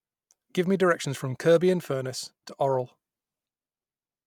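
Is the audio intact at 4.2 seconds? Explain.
Yes, at 4.2 seconds the speech plays through intact, with no dropout, click or distortion at that moment.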